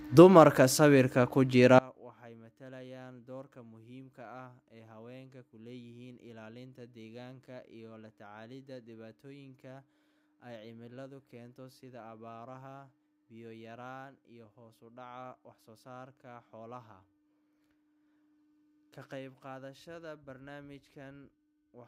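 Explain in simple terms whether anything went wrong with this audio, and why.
One channel inverted, from about 1.79 s, just after "sawirka ku", to the end: the speech suddenly drops to a faint whisper. The likely cause is one stereo side flipped upside down, so when both sides are combined, the shared speech cancels itself out.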